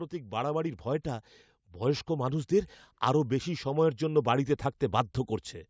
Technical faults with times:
0.11-5.21 automatic gain rising

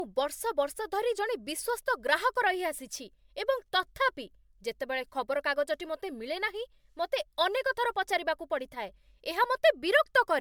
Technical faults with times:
0.00-10.40 generation loss

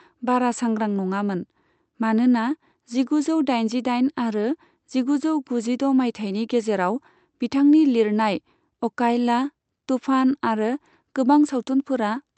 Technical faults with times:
none

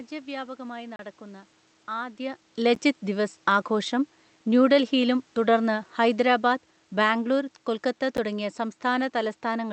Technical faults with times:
0.96-0.99 block of digital silence
2.75 block of digital silence
5.37-7.52 automatic gain falling
8.17 block of digital silence

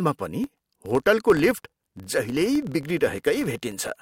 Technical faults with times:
0.44-4.02 filter restarted on every block

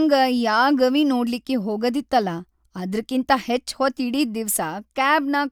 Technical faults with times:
none

